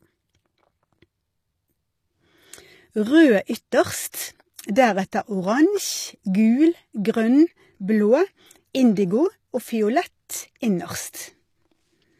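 Throughout the speech, sibilants sound gritty and metallic, with nothing above 14.9 kHz. This is likely HE-AAC compression rebuilding treble by copying lower bands upward, which fits roughly 24 kbps.

At 4.12 to 4.14 s, 5.12 s and 8.95 s, a brief hiss smears ahead of sharp attacks. This is pre-echo: block-wide quantisation noise spreads 10 to 20 ms before each onset.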